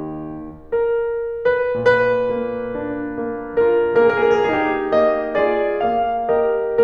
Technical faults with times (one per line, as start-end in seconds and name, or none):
none